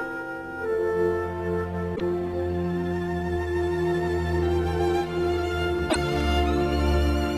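Damaged data in a compressed stream appears at 1.92 to 2.02 s and again at 5.87 to 5.96 s, each about 0.1 s long. Corrupted bytes made the decoder misread or reject frames and lose sync while hunting for the next valid header, so the sound breaks up briefly there.

Loose connector crackle follows at 6.13 to 6.21 s, lasting about 80 ms. A worn or dirty contact rapidly making and breaking chops the signal, producing an irregular burst of crackling or scratching across that span.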